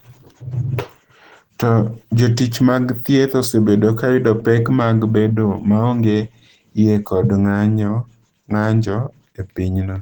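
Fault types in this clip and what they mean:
Opus compression: throughout, the speech sounds hoarse and grainy, likely from Opus's hybrid speech mode, which fits a low bitrate around 16 kbps.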